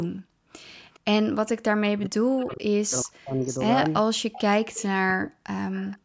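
This is a speech clip, band-limited to 8 kHz by the call's microphone processing, with echo-canceller faults throughout. The background is gated by the echo canceller at 0.23 to 0.59 s and 4.15 to 4.6 s. Each time, the room sound drops by up to about 40 dB for roughly a third of a second, then returns. There is echo leak at 0.68 to 1.5 s, 2.39 to 2.55 s, 3.45 to 4.87 s and 5.75 to 5.98 s. A faint delayed copy of the speech trails it, first by 409 ms, later by 472 ms. It sits well below the speech, loudest in the 3.45 s stretch. This is likely from a far-end loudspeaker echo the canceller failed to remove. Speech is suppressed in double talk at 1.87 to 3.47 s and 4.92 to 5.76 s. There, the speech dips very deeply. The likely cause is both sides talking at once, so the canceller turned down everything it heard.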